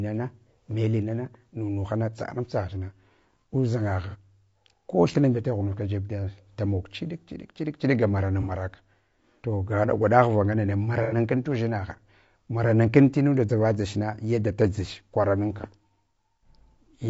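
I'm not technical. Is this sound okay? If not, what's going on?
No. Low-delay AAC compression runs through the whole clip: the speech sounds rough and grainy, likely from a video-call codec that saves delay by using very short chunks that capture the voice poorly.

AAC frame loss with concealment occurs at 4.10 s, 8.42 s and 11.03 s. Pieces of sound lasting about 30, 60 and 90 ms went missing, and the player filled them with smeared, noisy guesses.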